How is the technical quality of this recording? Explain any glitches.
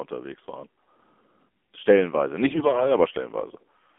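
The recording has been through a narrowband mobile voice channel, so its quality is limited throughout, and it has one short stretch of corrupted audio near the end.

AMR narrowband mobile codec: For the whole clip the speech passes through AMR-NB. On a spectrogram, energy sits only between about 250 Hz and 3.4 kHz, with nothing above. The codec rebuilds speech from a vocal-tract model fed by sparse pulses, and the plainly audible buzzy, synthetic texture suggests a low mode, around 7.4 kbps. The waveform looks smoothed and less detailed than natural speech.

AMR bit errors: From 2.48 to 2.96 s, the speech turns hoarse, scratchy and gargly while keeping roughly its pitch and loudness. Bits in the less-protected parts of the frames arrived flipped, at a rate of a few percent, but the check on the essential bits still passed, so the decoder used them. The excitation pulses land in wrong places and the fine gain and spectral values drift. 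A spectrogram shows smeared, noisy harmonics over that half-second, with an envelope of similar level.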